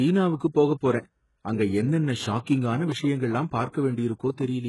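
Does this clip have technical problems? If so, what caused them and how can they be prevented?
Yes. Throughout the speech, the treble sounds bright but false. Sibilants come out gritty and metallic, and nothing is heard above 11.5 kHz. The likely cause is heavy HE-AAC compression at a very low bitrate, consistent with about 12 kbps. The codec keeps only the lower spectrum and fakes the top by copying lower bands upward under a rough envelope. The copied harmonics don't match the real ones, hence the lispy s sounds. To prevent this, encode at a higher bitrate with plain AAC or another full-band codec.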